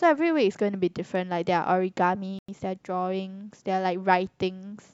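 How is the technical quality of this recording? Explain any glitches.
The speech has one playback dropout. At 2.39 s the sound cuts to silence for about 96 ms, resuming at 2.49 s. This is likely a Bluetooth stall: radio interference delayed packets, the headphones' buffer emptied, and playback paused until retransmitted audio arrived.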